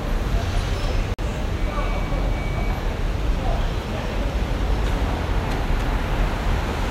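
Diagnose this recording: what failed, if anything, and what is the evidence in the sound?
What failed is the codec stage on decode: a corrupt frame muted. At 1.14 s the sound drops abruptly to dead silence and comes back at 1.22 s, an 80 ms hole whose length points to a single lost frame. Some bits in that compressed frame got flipped, the decoder rejected it, and the player filled the slot with silence instead of output. Timing stays intact, so what follows the gap lands exactly where it should.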